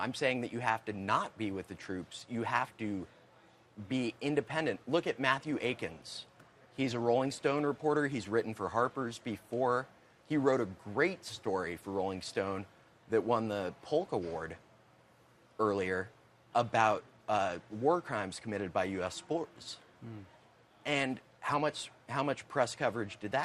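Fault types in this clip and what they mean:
Stream segment skipped: at 19.55 to 19.59 s the sound breaks with a short blip and carries on from a later point instead of where it left off, which is likely because one piece of a segmented stream failed to load and the player moved straight to the next. This differs from a dropout, where the audio goes briefly silent and then resumes at the same place with nothing lost: here the material around the break does not join up.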